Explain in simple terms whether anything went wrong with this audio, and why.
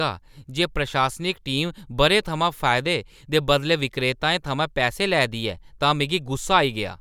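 Nothing went wrong here: the speech comes through as a steady, unbroken signal with no technical faults to point to at any moment.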